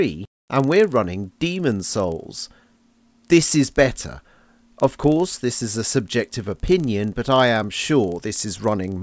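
Throughout the clip, a steady tick runs at 25 Hz, one every 40 ms, merging into a buzz at that rate while sound is present and vanishing when the sound stops. This is a resampler restarted on every block. Each 40 ms block was converted separately, likely from 48 kHz down to 16 kHz, so its edges lacked true neighbouring samples and carry a small error. Unlike buffer underruns, the ticks are perfectly regular, nothing drops out, and silence stays clean.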